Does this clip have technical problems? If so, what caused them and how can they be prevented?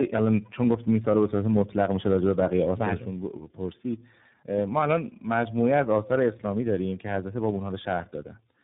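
Yes. Throughout, the speech sounds rough, muffled and warbly, with nothing above about 3.8 kHz. That fits tandem speech coding: the call seems to have passed through three lossy speech codecs in a row, likely AMR-NB, CVSD and finally iLBC, each re-coding the previous one's already degraded output. Preventing it means keeping one codec end to end, or passing the compressed stream through unchanged at network borders, instead of decoding and re-encoding at each link.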